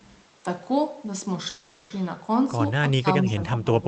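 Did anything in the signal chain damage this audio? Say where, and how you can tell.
Yes. At the network and jitter-buffer stage, the speech stalls from 1.49 to 1.92 s. For about 410 ms the last sound is stretched into a fading buzz or hiss, and then the speech picks up exactly where it left off, running about 410 ms later than before. Nothing is lost, and that is what marks it as a call audio freeze (likely packets held up in transit) rather than packet loss, which would cut content out.

In call processing, the speech is ducked twice: a brief dip of about 20 dB from 3.01 to 3.06 s, then a second attenuation of about 15 dB from 3.23 s to the end. This is speech suppressed in double talk, likely an echo canceller turning down the near talker while the far side spoke. Unlike a freeze, the timing stays intact.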